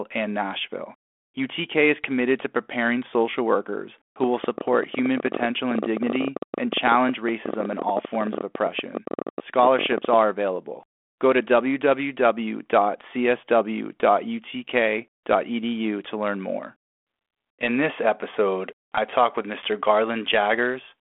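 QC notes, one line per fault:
4.24–10.14 s, train of clicks: right after "preparing social workers who", roughly a hundred same-shaped clicks arrive at about 15.8 per second with uneven spacing, peaking around 10 dB above the speech and audible in pauses too. The matching click shape sets this apart from random crackle. Likely interference or a faulty connection.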